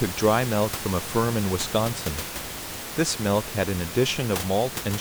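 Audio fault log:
No system faults found in this speech clip; the room noise under it sits about 10 dB below the speech and belongs to the recording.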